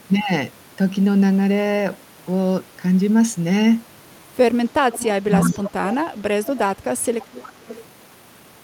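An echo canceller likely left part of its loudspeaker pickup in place, so an echo leak returns a quiet, 364 ms delayed copy of the speech at 4.92–5.06, 5.39–5.71, 5.90–5.94 and 7.21–7.85 s. Where both sides overlap, the canceller likely could not separate its own talker from that echo, causing speech suppressed in double talk: the talker drops sharply, by up to about 30 dB, at 5.19–5.33 and 5.52–5.83 s.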